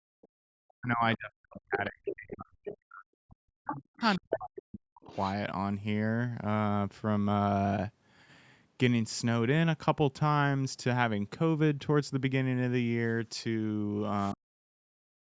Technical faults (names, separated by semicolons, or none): speech suppressed in double talk; other side's voice leaking through; background gated by the echo canceller